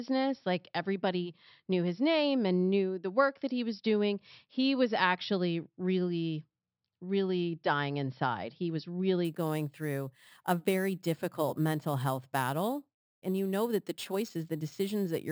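From 9.25 s to the end, the speech carries imaging from sample-and-hold upsampling: audio at 12 kHz was raised to 44.1 kHz by repeating samples unfiltered. A metallic fizz sits about 21 dB down, its lowest image mirrored between 6 and 12 kHz, showing as reflected harmonics on a spectrogram and staircase steps in the waveform.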